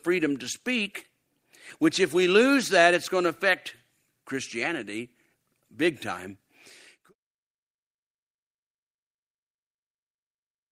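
The signal carries no technical faults, and the smooth fade-out that begins around 6.5 s and ends at 7.15 s is an ordinary editing choice rather than a defect.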